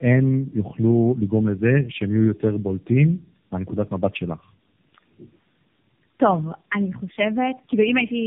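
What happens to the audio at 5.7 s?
At 5.7 s, as across the whole clip, tandem speech coding is audible: roughly three successive narrowband codec passes, likely AMR-NB, leave the speech rough, muffled, warbly and empty above 3.5 kHz.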